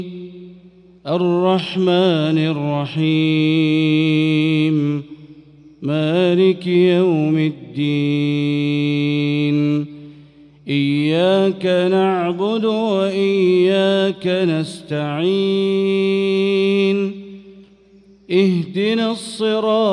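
Nothing in the recording stood out as a technical problem on listening.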